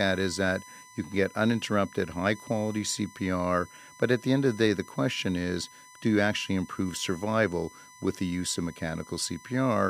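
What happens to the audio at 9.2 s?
At 9.2 s the speech carries USB whine, which runs through the whole clip rather than starting there. Current drawn by the USB bus in 1 ms frames is leaking into the audio path through the power or ground, so a steady tone at 1 kHz sits under the speech, roughly 25 dB below it. It is heard as a fixed-pitch whine that stays put while the speech moves around it.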